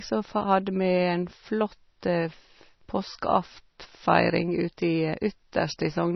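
Speech with heavy MP3 compression throughout: treble stops sharply at 5.9 kHz, sibilants chirp and sound swirls, likely from a very low bitrate near 24 kbps.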